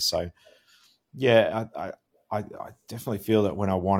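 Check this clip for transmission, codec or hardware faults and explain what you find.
No faults turned up anywhere in this clip.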